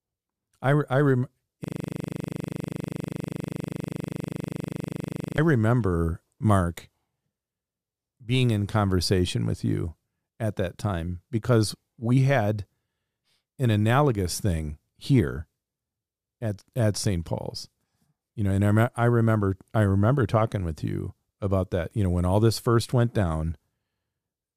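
A speech clip with a system hang loop from 1.64 to 5.38 s. The playback system froze while the hardware kept replaying one 40 ms slice of its buffer. That slice repeats exactly, about ninety times, giving a hard, rattling buzz at 25 Hz.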